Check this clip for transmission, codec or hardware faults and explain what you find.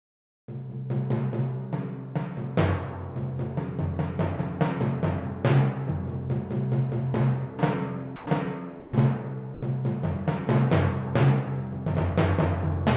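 Two kinds of fault are audible: a synthetic noise opening and three short gaps where sound gives way to noise. The audio stops at 4 kHz throughout, which fits a call path using G.711 A-law at 64 kbps.

Comfort noise in place of the background, 0.00 to 0.48 s: the opening background is replaced by a steady, featureless hiss, about 22 dB quieter than what follows. This is likely discontinuous transmission, where the sender stays silent and the receiver synthesises noise roughly matching the background.

Sound dropped by the voice detector, at 8.16 to 8.26 s, 8.80 to 8.92 s and 9.54 to 9.62 s: the sending detector likely misread quiet sound as background and stopped transmitting, so 100, 60 and 80 ms of sound give way to flat comfort noise before the signal returns.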